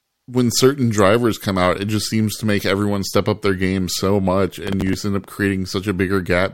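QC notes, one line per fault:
4.67–4.94 s, processor overload crackle after "their game so much": missed deadlines repeat stale snippets of roughly 10 ms, so the sound tears gritty until "end up".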